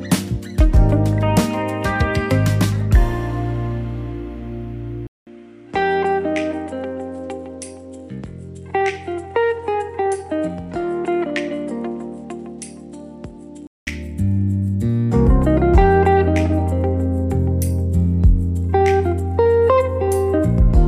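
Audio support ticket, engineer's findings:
Input likely switched to a poorer device, 5.07 to 13.87 s. Capture handed to a narrower-band input: nothing above 10.9 kHz, level down around 10 dB, new noise floor some 45 dB under signal. 0.2 s dropout at switch; sound dull, then clears.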